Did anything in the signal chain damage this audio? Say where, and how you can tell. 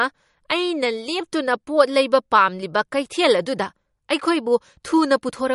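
Yes, at the codec stage, and it runs through the whole speech clip. There's nothing at all above about 11.2 kHz, a hard treble ceiling, and the speech has a plainly watery, swirly quality, with sibilants that chirp and smear. That's likely MP3 compression at a low bitrate, something around 48 kbps. Starved of bits, the encoder chops off the top band and zeroes the weaker frequency lines, which then flicker in and out from frame to frame.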